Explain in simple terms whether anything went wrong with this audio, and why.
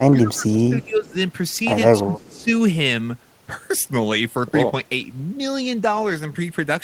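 Two things went wrong, both typical of a call where one side uses a loudspeaker.

Speech suppressed in double talk: from 0.11 to 1.16 s, and again from 1.99 to 2.48 s, the speech drops sharply in level, becoming much quieter for about a second and then for about half a second. The likely cause is the call's echo canceller mistaking the talker for loudspeaker echo while both sides spoke at once, and turning everything down. Unlike a network dropout, the sound dips rather than vanishing with a hard gap.

Echo leak: between 2.19 and 2.44 s, a very faint copy of the speech trails the original by about 0.29 s. This is likely the far end's echo canceller failing to remove all of the loudspeaker sound its microphone picked up, so some was sent back. It differs from room reverberation because it is a distinct delayed repeat, not a smooth tail of the sound fading away.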